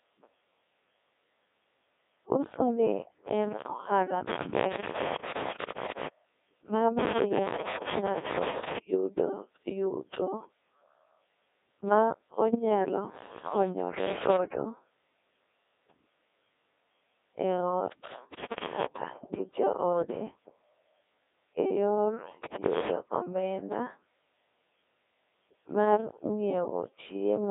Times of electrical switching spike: none

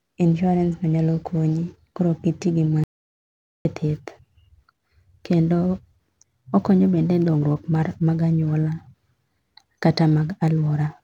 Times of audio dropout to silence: 2.84-3.65

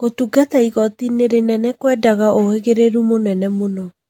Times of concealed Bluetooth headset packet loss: none

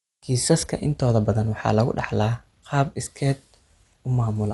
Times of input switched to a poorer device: none

